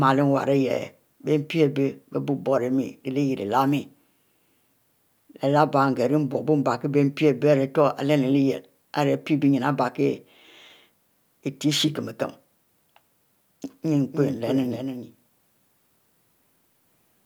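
From 13.94 s to the end, a second copy of the speech sits roughly 300 ms behind the original, around 10 dB quieter. It is a doubled audio track: full-band, with no decay or room colouring, and it begins abruptly rather than building up. The likely cause is the same signal reaching the mix twice, once directly and once through a slower path, so each syllable is followed by a distinct, dry repeat.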